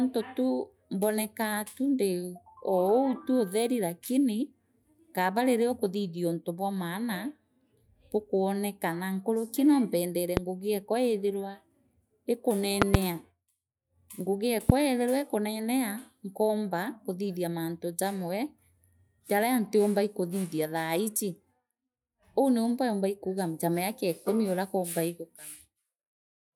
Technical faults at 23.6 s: none

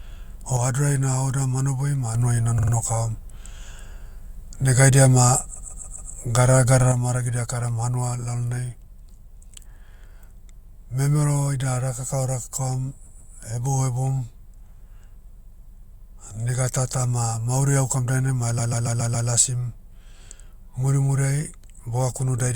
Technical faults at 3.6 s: none

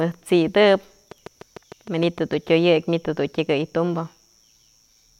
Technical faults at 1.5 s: train of clicks

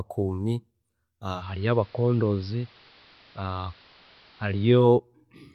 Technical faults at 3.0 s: digital radio blending to analogue

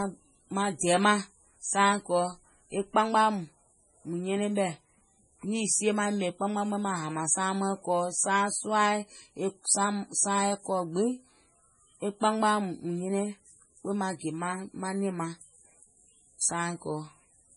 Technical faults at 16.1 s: MP3 compression

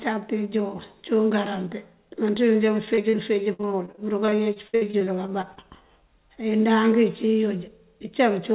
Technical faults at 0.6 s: none

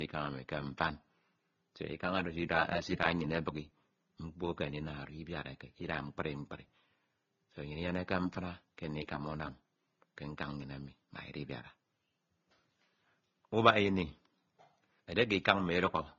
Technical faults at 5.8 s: transcoding between lossy codecs

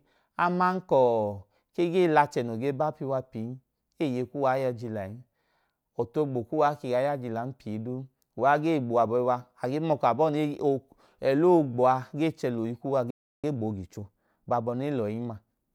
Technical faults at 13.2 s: playback stall

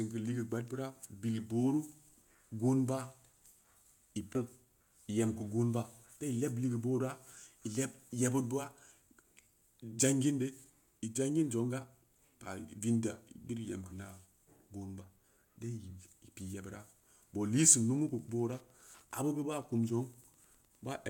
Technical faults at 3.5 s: none

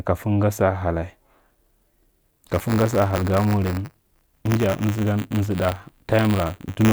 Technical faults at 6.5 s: buffer tearing

